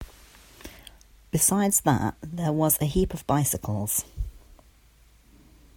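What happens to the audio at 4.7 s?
At 4.7 s the speech is under a wrong sample rate fault, running from 1.48 s to the end. Samples play faster than recorded, with no conversion. The speech sounds slightly faster and higher, about 1.09 times faster and 1.47 semitones up. This fits 44.1 kHz audio played at 48 kHz.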